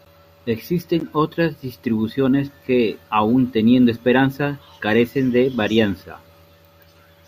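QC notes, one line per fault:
1.00 s, gap between stream segments: a hard-edged hole of about 13 ms in the speech right before "otras distribuciones que aun", where two segments' timestamps leave a gap that the player fills with silence.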